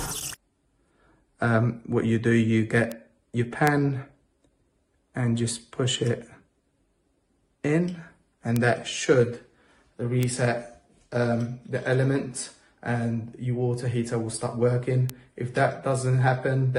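Sharp single ticks at 2.92, 3.67, 8.56, 10.23 and 15.1 s are bit error spikes: one or two flipped-bit samples jumping to about -5 dBFS (about -11 dBFS first).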